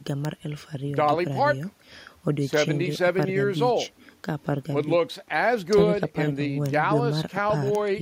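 No technical faults are audible.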